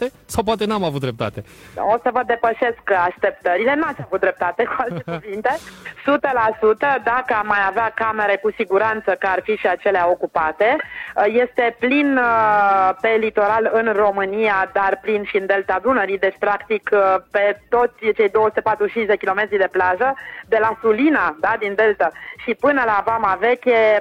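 Periodic clock jitter runs throughout: interference wobbling the converter clock at around 1 kHz puts sidebands on every component, giving high content a rough, metallic edge.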